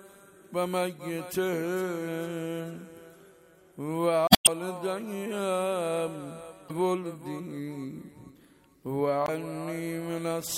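At 4.27 to 4.48 s, again at 6.66 to 6.71 s and at 9.25 to 9.29 s there's damaged data in the compressed stream: the decoder hits bad bytes, loses frame sync and hunts for the next header, so each spot comes out as a chirp, squawk, click or brief hole.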